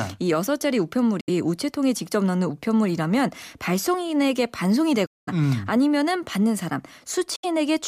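The speech cuts to silence three times, from 1.20 to 1.30 s, from 5.06 to 5.29 s and from 7.36 to 7.45 s, with a missing stretch of about 70 ms, 209 ms and 70 ms. This is likely a Bluetooth dropout: packets reached the headphones too late and were discarded. What sets it apart from a buffer stall is that the speech doesn't resume where it stopped. It picks up further on, with the missing stretch simply gone.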